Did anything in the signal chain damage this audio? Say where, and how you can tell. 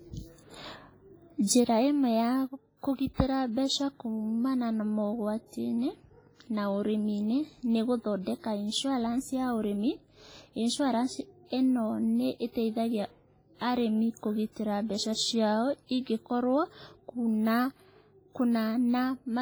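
Yes. The damage sits at the codec stage. Throughout this speech the sound rings and washes, with a hiss that swells and fades with the talker, and the upper band is thin and patchy. That points most likely to WMA compression, consistent with WMA 1 at a low bitrate around 24 kbps. Heavy quantisation leaves smeared noise across long transform blocks and zeroes the weaker lines. On a spectrogram the high frequencies break into blotchy islands with holes between them, framed by noise that tracks the signal.

Pre-echo appears at about 3.14 to 3.18 s, a 44 ms hiss just before "mbeca kuumana na mogwatiinĩ". The onset landed late in a transform block, so the noise sized for the loud attack was spread back over the quiet gap ahead of it. The attack sounds softened and smeared. On a waveform a low fuzzy ramp leads into the transient, and the spectrogram shows a faint broadband smudge ahead of the onset edge.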